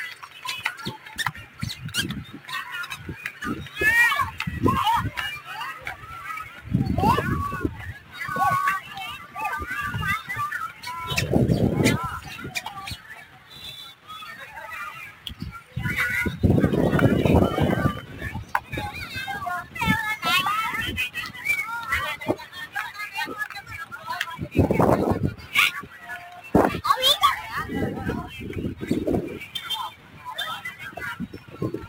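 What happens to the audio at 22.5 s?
At 22.5 s the audio carries sample clock jitter, which runs through the whole clip rather than starting there. The converter's timing wanders by something on the order of 10 microseconds, so each sample lands slightly off its proper instant, and steep, fast-moving parts of the waveform pick up error around 20 dB below the signal. It sounds like a gritty hiss riding on the sound. Unlike a steady noise floor, it swells with loud, bright passages and disappears in silence.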